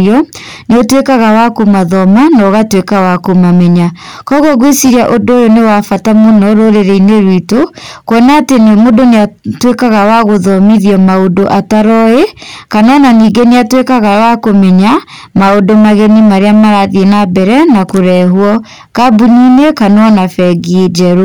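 Hard clipping runs through the whole clip: the speech reaches some stage driven about 10 dB beyond what it can pass, so roughly a fifth of the samples are cut flat. Every loud syllable carries a harsh, buzzy fuzz from the added high harmonics.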